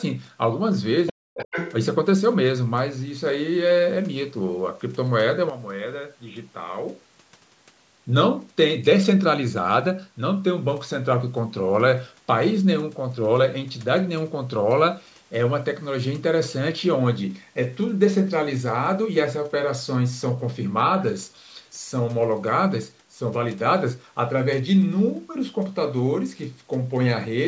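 At 1.07 s, the echo canceller likely failed to remove all of the far end's loudspeaker sound from the microphone, so the other side's voice leaks through. It is a brief scrap of a second voice, about 10 dB below the talker, lasting until 1.13 s. It returns more strongly from 1.34 to 1.73 s, only about 5 dB under the talker.

Between those two leaks, from 1.12 to 1.28 s, both sides were talking at once. The echo canceller likely could not tell the near talker from the echo and pulled everything down. This is speech suppressed in double talk: for roughly 150 ms the talker's voice drops away sharply, by around 40 dB at its deepest.

At 5.50 s, the system likely switched its input to a poorer device, and stayed on it until 7.70 s. Before the switch, the call microphone processing passes sound up to 8 kHz. After it, a narrower band comes through, so the sound turns dull and boxy. The level also falls by about 10 dB, and a new noise floor appears far below the signal. 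There is no gap at the switch; the tone simply changes abruptly, then clears again at 7.70 s.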